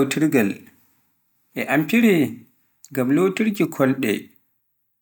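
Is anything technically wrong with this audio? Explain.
No, nothing in this speech recording stands out as a technical fault.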